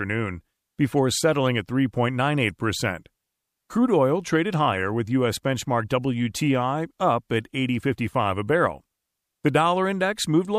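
No technical faults can be heard anywhere in the speech recording; the signal stays continuous and intact throughout.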